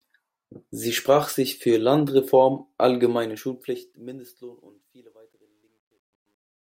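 A speech recording whose fade-out, running from about 3 s to the end at 6.76 s, is processed with too few bits and no dither, which fits 11-bit resolution. This causes truncation distortion on a fade from 3.08 s onward, turning the tail gritty, worst from 4.51 s to 6.76 s.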